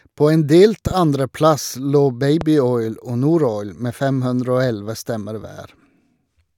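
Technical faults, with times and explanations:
0.87–0.93 s and 2.41–2.44 s, loud pops: right after "en delt" comes a sharp double pop, two clicks in quick succession, and a single pop follows later, each standing out roughly 10 dB above the speech, which carries on underneath. This is likely a sudden voltage step or pulse, from a switch, plug contact, static discharge or driver glitch, added to the signal, with the following circuitry shaping each pulse into a brief thump.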